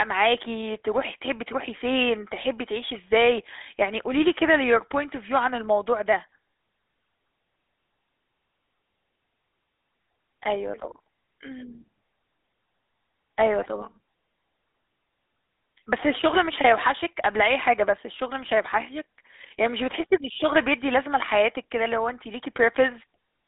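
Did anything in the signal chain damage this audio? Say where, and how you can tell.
Yes, the GSM full-rate codec damaged it throughout: the speech is confined to about 250 Hz to 3.6 kHz, with nothing above 3.8 kHz. Unlike plain telephone band-limiting, it adds a gravelly buzz from coarse pulse excitation, which fits roughly 13 kbps.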